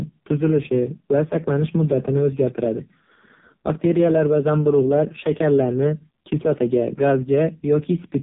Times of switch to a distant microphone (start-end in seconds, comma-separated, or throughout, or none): none